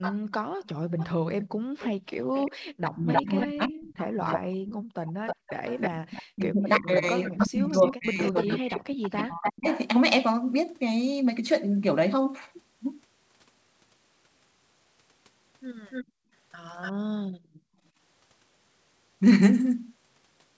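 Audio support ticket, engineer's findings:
Echo leak, 0.01–9.5 s and 15.9–16.92 s: delayed copy of the talker trailing by about 312 ms, then 290 ms, roughly 10 dB down. Likely far-end canceller residual from loudspeaker pickup. Unlike reverb, the copy is a single discrete repeat, not a smooth decay.

Background gated by the echo canceller, 0.18–1.74 s and 16.05–17.78 s: room tone drops by about 40 dB, then 39 dB, for about half a second and a second in total. The canceller clamps the mic while the loudspeaker plays.

Speech suppressed in double talk, 2.16–9.69 s: the talker's own voice dips or cuts out in pieces, up to about 40 dB, roughly four seconds in total. The canceller is likely suppressing during overlap. Unlike gating, the voice itself is lost, not just the background.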